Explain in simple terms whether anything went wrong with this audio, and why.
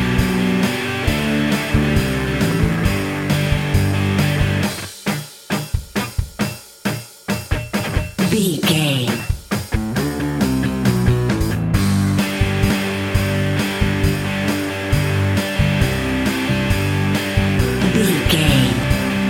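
Damaged data in a compressed stream causes brief blips at 2.51, 12.70 and 18.83 seconds: corrupted bytes confuse the decoder, which loses its place and hunts for the next readable frame.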